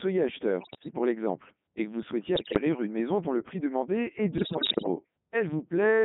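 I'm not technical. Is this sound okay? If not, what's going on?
No. The whole recording has passed through a Codec 2 vocoder, a very compact system used on digital radio. Rather than sending the actual voice, it sends a rough description (pitch, loudness, voiced or unvoiced, overall tone colour), and the receiver rebuilds speech from simple tones. That is why the speech sounds robotic, buzzy and thin, squeezed into a narrow phone-like band of roughly 150 Hz to 3.6 kHz. Unlike ordinary muffled or low-quality audio, the voice itself sounds artificial, as if a machine were imitating it.

On top of that there are three bursts of bit errors on digital voice radio, the kind that happen near the edge of a radio signal's range. Corrupted data gets fed into that rebuilding process, so the voice suddenly jumps in pitch, loudness and tone and breaks into bleeps, warbles and gibberish. This happens from 0.60 to 0.98 s, just before "l'exemple et que vous", from 2.36 to 2.61 s, between "et que vous souhaitiez" and "une maison dont le", and from 4.38 to 4.88 s, right after "le prix demandé est". 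The last burst is the most garbled. Unlike a dropout, the sound doesn't go silent. It keeps playing, but as nonsense.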